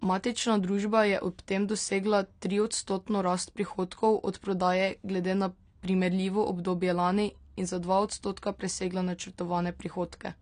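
From start to finish the speech sounds dull and smeared. Nothing reaches above 9.6 kHz, so sibilants lose their edge. What remains up top has a watery, warbling texture. Sustained sounds fizz and shift. The likely cause is AAC compression at a low bitrate, something near 32 kbps for AAC-LC. At that rate the encoder lowers its cut-off and drops detail it judges inaudible, and the loss is plainly audible.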